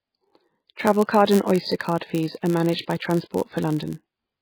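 From the first moment to the last, the speech sits under a dull, watery haze. The treble is cut off, the s sounds come out swirly and chirpy, and the starts of syllables smear. That points to heavy MP3 compression, likely at a very low bitrate, something like 16 kbps. The encoder runs out of bits, cuts the treble off at a fixed point, and drops weaker frequency lines that flicker in and out from frame to frame.

Running underneath for the whole clip there's also a steady buzz at about 99.6 Hz, the signature of a block size mismatch (padded). One stage hands over blocks a little shorter than the next stage expects, and the missing tail of each block gets filled with zeros. Those tiny silent gaps repeat at the block rate and make the buzz. They also stretch the audio very slightly, to 0.996 of normal speed, with the timbre unchanged.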